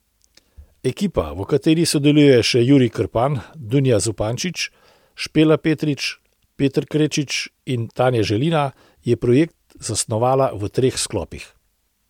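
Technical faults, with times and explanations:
No technical faults can be heard in this speech recording. There is nothing here that needs a time or an explanation.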